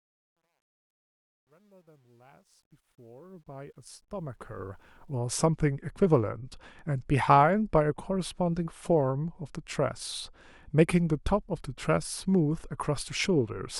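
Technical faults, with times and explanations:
0.0–5.18 s: truncation distortion on the fade-in. Without dither, the level steps (consistent with 11 bits) leave the quiet speech gritty, worst before 3.31 s.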